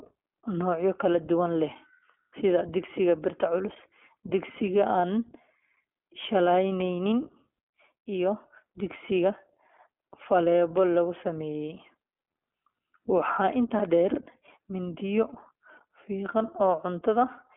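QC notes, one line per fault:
Throughout: iLBC codec. Nothing passes above 3.8 kHz, and each 20 ms frame is coded independently, leaving a rough, synthetic grain that plain telephone band-limiting would not add.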